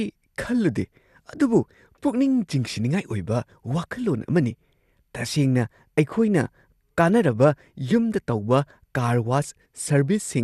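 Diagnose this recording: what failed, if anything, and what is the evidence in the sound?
The speech sounds dull and gurgly for its whole length, with a granular roughness on the voice and nothing above about 12.2 kHz, as if the top of the spectrum had been shut off. The stage is the codec, and the likely cause is MP2 compression at a low bitrate, which the damage suggests is around 80 kbps. Starved of bits, the encoder switches off its upper sub-bands and coarsely quantises the rest, so bands flicker and texture breaks up.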